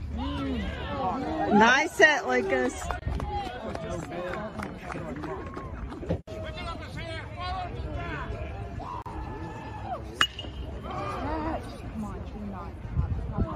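Brief silences cut into otherwise continuous sound at 2.99 to 3.02 s (27 ms) and 9.02 to 9.06 s (37 ms), six seconds apart, with smeared edges before the audio resumes where it stopped. These are gaps at joins of encoded pieces, where untrimmed encoder start delay and final-frame padding remained.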